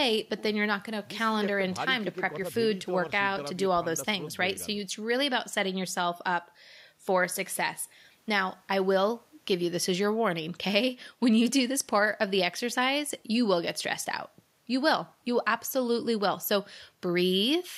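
Just speech here, and nothing technically wrong turns up anywhere in it to flag.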